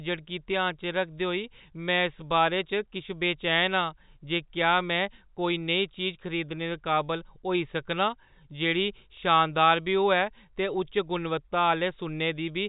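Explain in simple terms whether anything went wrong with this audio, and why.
Nothing went wrong with this audio; the speech comes through as ordinary telephone-line sound, with no faults to point to.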